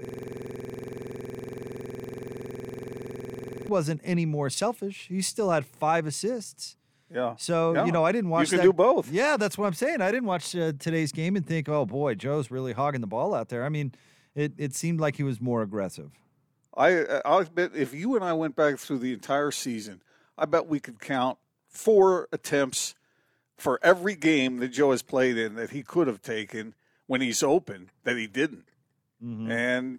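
Until 3.69 s, before "any more selfish", a system hang loop repeats one identical 46 ms slice, a 21.5 Hz buzz fitting a 2048-sample ring buffer.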